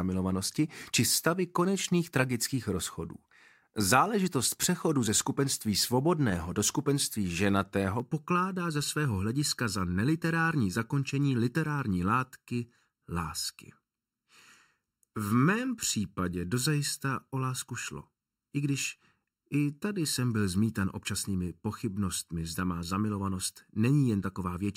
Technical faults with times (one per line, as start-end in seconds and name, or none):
8.00-24.76 channel delay (comb filtering)